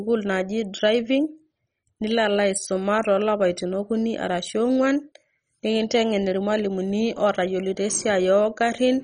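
From start to finish the speech sounds dull, with nothing above about 10.4 kHz, and carries a heavy gurgling, granular grain. This is likely MP2 compression at a starved rate, which fits something like 32 kbps: the encoder splits the sound into 32 equal sub-bands and, short of bits, switches upper bands off and quantises the rest coarsely. Unlike a simple low-pass filter, the top flickers in and out while the remaining bands churn and gurgle.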